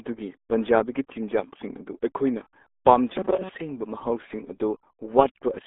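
From the start to the end, the speech carries the sound of the RealAudio 14.4 codec. The damage is heavy. Nothing passes above about 3.8 kHz, and the usable band sits between roughly 250 Hz and 3.6 kHz. That points to a very low bitrate, around 8 kbit/s, built for dial-up lines. The coder keeps only a crude outline of each sound. So the voice comes across muffled and gargly, with no air or crispness at the top.

From 3.14 s to 3.51 s, the speech turns into robotic sound from repeated short buffers. For most of that stretch, the voice becomes a rigid, metallic buzz at about 188 Hz. It still loosely tracks the speech underneath. The likely cause is audio arriving too late. The playback fills the gaps by replaying a tiny slice over and over, about 5.3 ms long. That fixed loop length imposes its own pitch.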